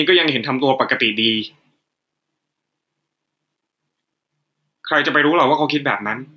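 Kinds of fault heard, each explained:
gain pumping: the gain swings about 5 dB, pulled down under loud speech, likely by a fast limiter; unlike gating, the level is pulled down rather than cut out.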